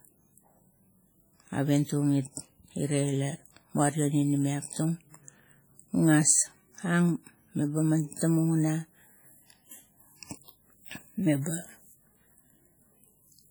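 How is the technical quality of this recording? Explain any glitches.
The speech carries heavy codec damage for its whole length, most likely from WMA compression. The audio rings and sounds washy, with a hiss that rises and falls with the speech, while content still reaches about 20.1 kHz. WMA is a transform codec that quantises blocks of frequency lines. The damage points to a low bitrate near 32 kbps, where weak lines are zeroed and the quantisation noise smears across tens of milliseconds around each sound.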